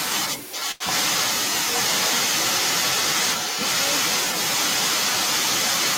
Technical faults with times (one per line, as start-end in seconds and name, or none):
0.50-1.35 echo leak
0.71-0.83 short stall from a late packet
1.79-5.98 echo leak